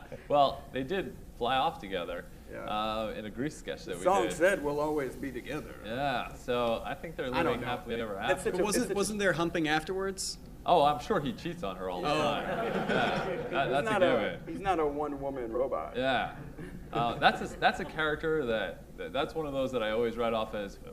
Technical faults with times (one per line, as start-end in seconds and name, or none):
7.90-8.00 frames out of order
15.54-15.60 frames out of order